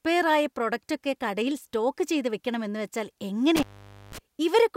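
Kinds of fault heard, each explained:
Intermittent contact: Near the end, from about 3.56 to 4.18 s, the speech cuts out for roughly half a second (495 ms) with crackle at the edges and faint hiss in the gap, as a loose cable or plug briefly opens the signal path.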